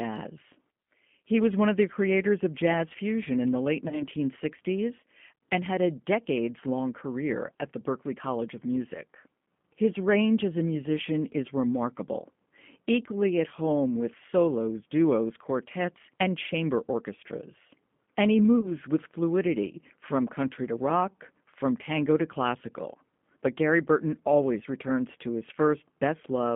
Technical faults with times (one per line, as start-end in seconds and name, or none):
0.00-26.55 G.729 codec
3.88-4.03 VoIP packet loss concealed by the speech codec
18.61-18.71 VoIP packet loss concealed by the speech codec